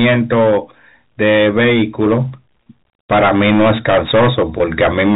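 Speech, heard through a telephone channel with nothing above 4 kHz. Hard clipping runs through the whole clip. The level is driven about 15 dB too hot, so roughly a tenth of the samples hit the ceiling. Their tops are cut flat, giving harsh fuzz on every loud syllable. Packet loss with pitch repetition appears twice, at 2.64 to 2.66 s and 4.58 to 4.60 s. Each gap is about 20 ms, which points to one lost packet. The last pitch period is repeated to fill it, so it sounds like a brief buzzy hold.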